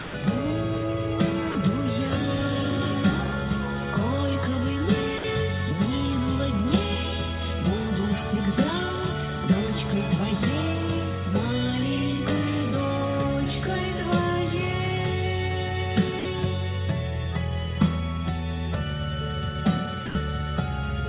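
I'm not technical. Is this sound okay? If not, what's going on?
No. At five points the sound briefly drops out and is replaced by a soft, steady hiss: 0.00 to 0.14, 1.52 to 1.55, 5.18 to 5.24, 16.19 to 16.25, and 20.06 to 20.15 seconds. Each gap lasts between 30 and 140 milliseconds. This is likely sound dropped by the voice detector: the sending end mistook that moment for background, stopped transmitting, and the receiving end filled the gap with comfort noise until the sound resumed.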